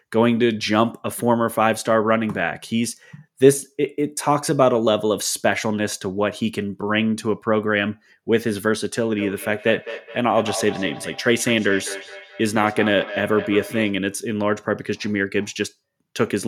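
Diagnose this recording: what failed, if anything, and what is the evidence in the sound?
The call processing failed: two devices in the same room were on the call, and one device's microphone picked up the other's loudspeaker. Each echo canceller removes only what its own device plays, so the feedback echo between two devices went uncancelled. From 9.18 to 14.05 s the speech returns at a fixed interval of roughly 200 ms. Each repeat comes back thinner and more ringing, and the loudest sits about 12 dB below the direct speech.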